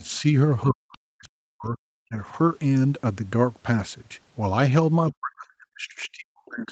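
A speech clip carried over a call path whose Opus coding leaves nothing above 8 kHz. Faint scraps of a second voice, some 35 dB under the talker, surface at 0.0–0.09 s and 0.92–0.98 s. These are likely the other side's voice leaking through past the echo canceller, seen as thin, low-energy harmonic traces on a spectrogram. The talker's level also drops: about 10 dB at 0.16–0.26 s, about 40 dB at 0.65–1.77 s, about 35 dB at 2.07–2.19 s, and about 40 dB from 5.12 s to the end. This is likely speech suppressed in double talk, showing as dips in the waveform and darker spectrogram columns.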